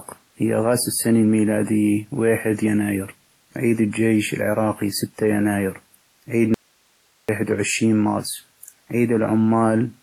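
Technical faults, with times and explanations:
Throughout, transcoding between lossy codecs: the speech carries the smeared, swirly artefacts of two lossy codecs stacked, likely HE-AAC at 24 kbit/s then WMA at 32 kbit/s, each adding its own damage. A spectrogram shows a hard ceiling near 14.9 kHz, with blotchy, gappy high bands beneath it.
6.54–7.29 s, audio dropout to a faint residue: right after "العراقي ستي يناير عيد" the speech cuts out abruptly for about 0.74 s, leaving only hiss around 40 dB down, likely a break upstream with the later path still live. The waveform collapses to a thin flat band with sharp edges.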